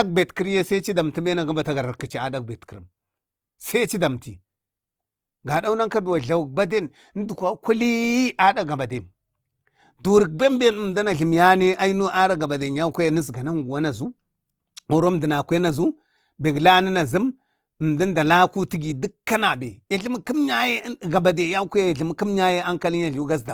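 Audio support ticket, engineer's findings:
Grainy, rough texture across the whole clip, tones turning noisy rather than swirly. Likely Opus compression, CELT mode, bands filled by folding and noise at roughly 24 kbps. Bandwidth still full, content reaching 20.2 kHz.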